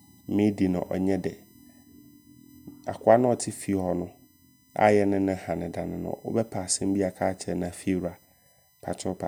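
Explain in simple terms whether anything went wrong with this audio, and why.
USB whine runs throughout the clip: a faint, steady whistle at 1 kHz and its higher multiples, caused by the USB connection's regular power pulses leaking into the audio.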